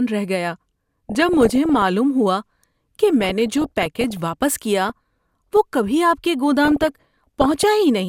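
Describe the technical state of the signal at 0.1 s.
At 0.1 s the speech signal is intact, with no fault audible at that moment.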